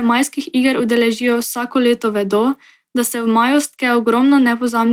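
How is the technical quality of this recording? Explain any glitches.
One glitch is audible in this speech clip. A lost packet rebuilt from error correction occurs at 1.25 to 1.35 s: the packets that followed carried low-bitrate backup copies, which the decoder played instead of leaving a gap. About 60 ms sounds briefly rougher and noisier, which fits three lost packets.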